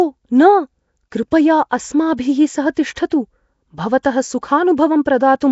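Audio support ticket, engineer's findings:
Low-rate transform codec throughout, likely Nellymoser compression, sound fitting roughly 32 kbps: empty bands noise-filled, nothing above 7.7 kHz, rough hissy halo and smeared underwater quality.

Pre-echo at 4.03 s: block-wide quantisation noise spilling ahead of a late sharp attack. About 17 ms of hiss before the onset, attack softened and smeared.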